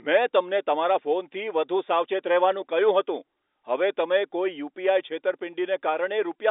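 No technical faults are audible in this speech.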